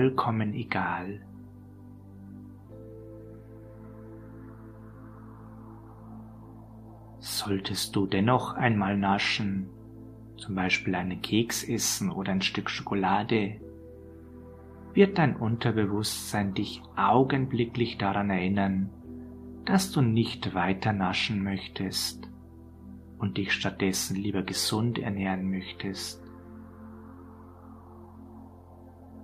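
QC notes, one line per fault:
Nothing to flag here; the audio sounds fine all the way along.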